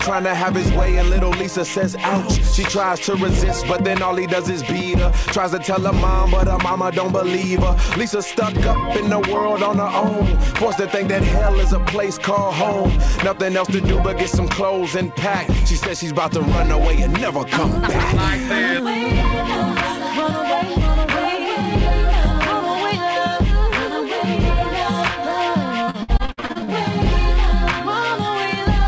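From 25.85 to 26.73 s there's repeated packet loss, giving a choppy, robotic stretch. Around eleven short holes (up to 58 ms) get patched by stretching earlier sound, covering roughly 44% of that span.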